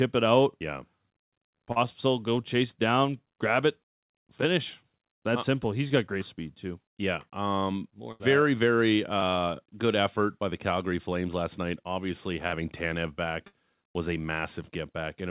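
At 1.72 s, just before "go chase down grab", at 5.88 s before "got great speed too", and at 9.19 s, short concealed packet loss: about 40 ms, then 20 ms, then 20 ms never arrived in time, and the receiver extended the preceding sound, leaving brief smears.

At 8.12 s, 12.47 s and 13.47 s, just before "was a", a burst of packet loss dropped about 80, 40 and 60 ms. The receiver held and faded the last sound into a buzz or hiss, and the audio resumed with a piece missing. Over the G.711 mu-law call path, nothing is heard above 4 kHz.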